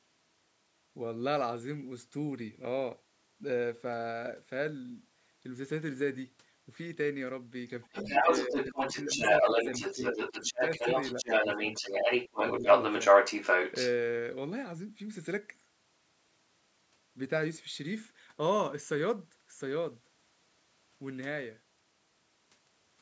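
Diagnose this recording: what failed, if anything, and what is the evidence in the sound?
The call's echo canceller likely failed to remove the loudspeaker signal from the microphone path, so the other side's voice leaking through is audible from 7.68 to 13.92 s. For those six seconds a second talker sits underneath the speech, at a level around 5 dB above the near talker rather than below it. The residual echo passed through instead of being subtracted.

The same stage produced speech suppressed in double talk, likely because the canceller treated the overlapping voices as echo and attenuated everything. The near talker dips at 7.88 to 9.62 s and 9.95 to 10.61 s, by up to about 10 dB, and more briefly at 11.22 to 11.43 s and 12.60 to 12.64 s, by about 5 dB. Together these amount to under a second of lost level, heard as the talker fading out exactly where the leaked voice overlaps. The band limit near 8 kHz comes from normal call microphone processing.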